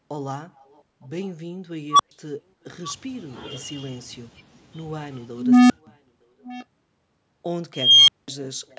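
Echo leak at 0.74 to 0.81 s, then 2.88 to 2.93 s: a faint delayed copy of the speech returns 0.91 s late, about 40 dB and then about 20 dB below the speech, likely from a loudspeaker echo canceller letting the far end's own audio through.

Unstable filter at 1.90 to 2.11 s: a tone around 1 kHz swells over 92 ms until it clips, then drops to 120 ms of silence while the runaway filter resets.

Unstable filter at 5.37 to 5.87 s: the same runaway behaviour builds a tone around 300 Hz for 332 ms before the sound cuts out for 170 ms.

Echo leak at 6.43 to 6.65 s: the same 0.91 s delayed copy returns at about 20 dB below the speech.

Unstable filter at 7.74 to 8.28 s: a tone around 3 kHz grows over 345 ms into a loud squeal, followed by 200 ms of silence.

Echo leak at 8.70 to 8.78 s: the delayed copy returns once more, about 40 dB below the speech.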